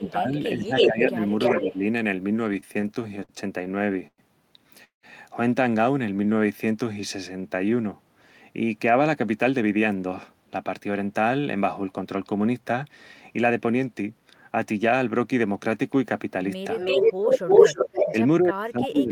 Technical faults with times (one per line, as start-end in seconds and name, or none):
0.00-1.21 speech suppressed in double talk
0.04-0.11 echo leak
0.77-0.90 echo leak
1.38-1.62 echo leak
1.56-1.83 speech suppressed in double talk
2.53-4.21 repeated stalls (stutter)
4.84-5.06 call audio freeze
6.32-7.70 jitter buffer slow-down
9.44-12.89 jitter buffer speed-up
16.78-18.12 echo leak
18.40-19.11 speech suppressed in double talk